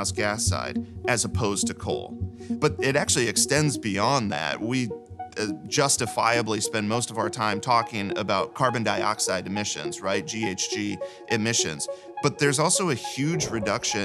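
Listening closely, nothing in the audio stood out as a technical fault at any point.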